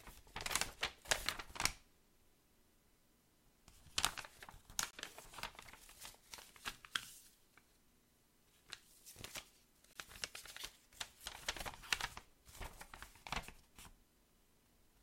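Two short holes cut into the sounds, from 4.91 to 4.93 s and from 9.93 to 9.96 s, each about 23 ms long and five seconds apart. This is a gap between chunks: the audio was handled in 5-second blocks, with silence inserted at each join rather than lost sound.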